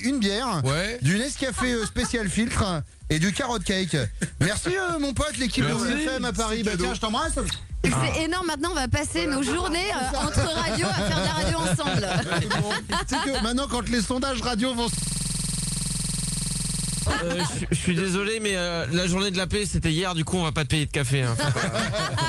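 A system hang loop from 14.93 to 17.06 s: the machine froze while the hardware kept replaying one 46.44 ms buffer, which fits a 2048-sample ring buffer, producing a rapid 21.5 Hz stutter.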